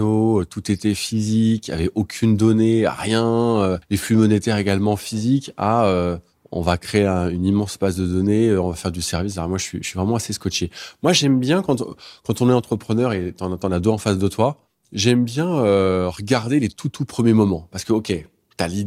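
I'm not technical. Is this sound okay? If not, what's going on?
Yes, nothing stood out as a problem when listening to this recording.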